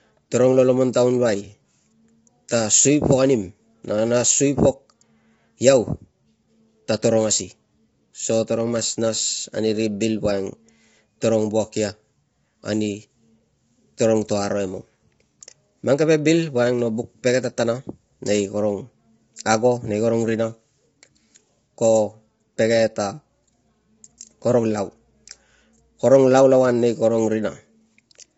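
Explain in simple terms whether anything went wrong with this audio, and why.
The whole recording sounds rough and grainy, with nothing above about 7.7 kHz. This is likely low-delay AAC compression, as used in video calls.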